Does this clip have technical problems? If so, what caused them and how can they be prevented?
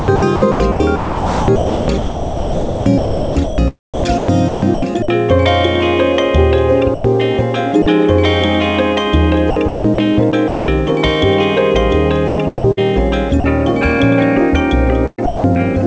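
Yes. The first problem is sound chopped by the voice detector, over 0.00 to 5.08 s, 9.50 to 10.68 s, 12.28 to 12.81 s and 15.06 s to the end. In each stretch the sound repeatedly breaks off and synthetic noise fills the gaps; about 3.1 s of the opening five seconds is filler. The likely cause is a sender-side voice activity detector toggling on and off and the receiver inserting comfort noise. Lowering the detector's threshold and adding hangover time would prevent it.

The second problem is sound dropped by the voice detector, at 6.94 to 7.04 s (100 ms), 7.82 to 7.86 s (40 ms) and 13.40 to 13.44 s (40 ms). Each time a short piece of sound disappears and is replaced by steady background noise, then resumes. The likely cause is the detector briefly classifying quiet sound as background and halting transmission while comfort noise played. Disabling discontinuous transmission, or making the detector less aggressive, would prevent it.

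The call path's band limit, with nothing above 8 kHz, fits a wideband codec such as G.722 and is expected behaviour, not a fault.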